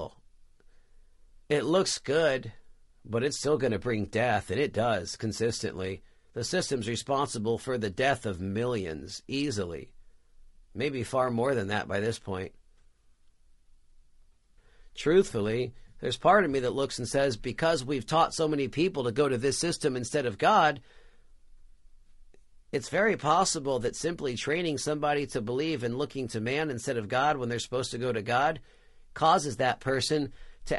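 From start to finish the speech sounds rough and grainy, with noise filling the gaps between pitch harmonics and a dulled, somewhat synthetic top band. The likely cause is low-delay AAC compression (AAC-ELD), whose short frames smear harmonics. The plainly audible damage fits a 32 kbps stream.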